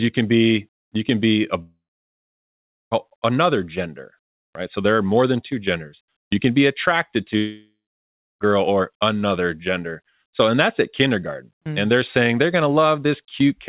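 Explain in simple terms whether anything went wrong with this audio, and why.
Twice the sound cuts out: from 1.62 to 2.93 s after "you can be a", and from 7.37 to 8.42 s after "can be attracted". A brief fading buzz gives way to silence, and the audio resumes at "another gender right" and "or another gender" with that stretch missing, likely a long network dropout.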